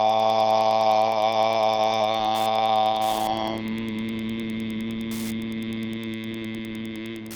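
Wi-Fi interference runs throughout: a nearby radio's beacon, repeating every 102.4 ms, is rectified by the audio circuit into steady ticking about ten times a second, roughly 25 dB below the signal. That slow, regular tick separates it from the faster, buzzier pulsing of GSM interference.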